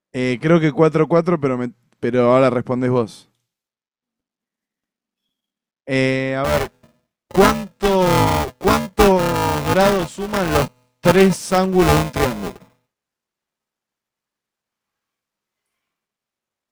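From 6.44 s to the end, buffer tearing sets in: writer and hardware reader have slipped, so about 30% of each buffer replays audio a few milliseconds old. A rattling 375 Hz buzz results, fitting a 128-sample buffer, seen as evenly spaced waveform discontinuities and vertical spectrogram striations.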